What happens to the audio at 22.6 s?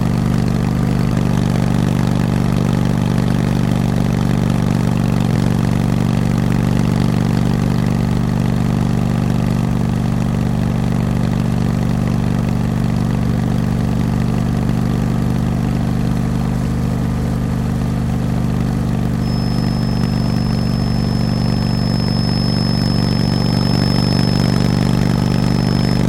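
A feedback whistle runs from 19.16 s to the end: a thin, wavering 5.2 kHz tone well under the sound, likely from a speaker-to-mic loop hovering at the edge of feedback.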